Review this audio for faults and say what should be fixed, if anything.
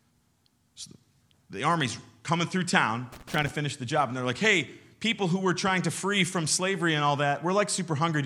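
There's a burst of loose connector crackle from about 3.12 to 3.51 s, roughly 0.38 s of irregular scratching over the speech. That's a cable or jack contact that's worn or grubby, making and breaking as something shifts, so the signal gets chopped on and off and any DC sitting on the line turns each break into a little pop. Worth fixing: clean or reseat that connector, or just swap the cable, and strain-relieve it so it can't wiggle during a take.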